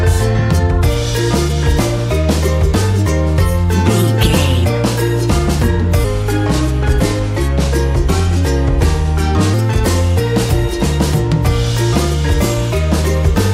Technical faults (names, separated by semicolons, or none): section at the wrong speed